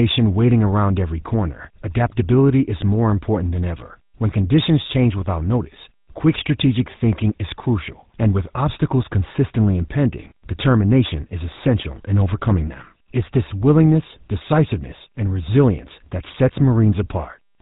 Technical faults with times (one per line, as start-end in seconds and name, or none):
0.00-17.62 GSM full-rate codec